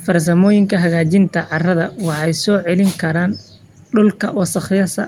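Nothing stood out as a technical problem anywhere in this speech recording on listening.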